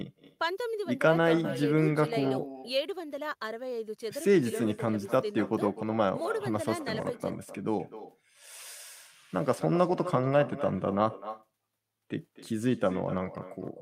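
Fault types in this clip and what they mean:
Echo with no canceller: the far end's microphone picks up its loudspeaker and nothing removes it, so speech repeats throughout, about 14 dB quieter, roughly 300 ms later.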